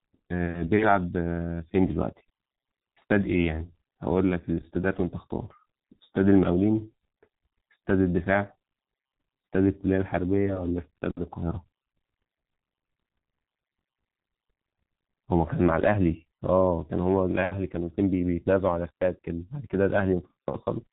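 From start to finish this speech runs through a G.723.1 codec, and the damage is heavy. The coding packs the signal into 30 ms frames at a very low rate, fitting a 6.3 kbit/s stream, so the voice model lags behind fast changes: consonants smear, vowels turn hoarse and buzzy, and everything sounds muffled. On a spectrogram, energy stops abruptly at 3.8 kHz with a blank band above, and harmonics look blocky frame to frame.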